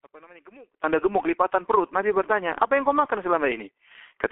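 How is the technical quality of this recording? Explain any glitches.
Technical quality is poor: the audio is heavily degraded throughout, and the opening is almost missing.

From 0.0 to 0.84 s the speech drops by about 26 dB to a faint trace, likely one channel inverted, so the shared centre cancels when summed to mono.

Across the whole clip the speech is muffled and hoarse with smeared consonants, nothing above 3.6 kHz and a telephone band of 300 to 3400 Hz. This is the G.723.1 codec's heavy damage, which fits a 6 kbit/s-class encoding.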